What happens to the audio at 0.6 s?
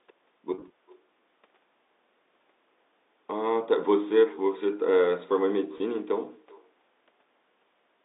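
Between 0.54 and 0.70 s, packets were lost. The gaps add up to 80 ms, scattered over about 160 ms, which fits four 20 ms packets going missing, with the longest single gap 40 ms. The receiver covered each one by repeating the last pitch period and fading it down. Because no gap outlasts that fade, the sound never drops to silence. Instead it briefly sticks on a slightly held, buzzy tone before normal audio cross-fades back in. This is packet loss with pitch repetition.

Over the same moment, and throughout the clip, there is echo with no canceller. The far end's loudspeaker output leaks into its microphone, and nothing removes it, so the audio returns after a network round trip of roughly 0.4 s. At about 25 dB below the direct sound, it trails each sound as a faint, thin copy.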